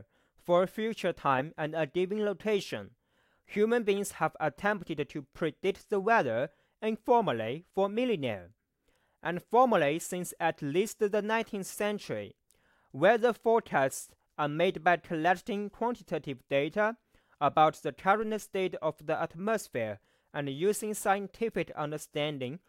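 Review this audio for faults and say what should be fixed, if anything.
At 18.22 s there's a DC step: the waveform's zero line jumps by about -42 dBFS, giving a low thump under the speech, then eases back as a 2 Hz high-pass drains it. One fix is to keep the converter from recalibrating and avoid switching in offset inputs mid-take.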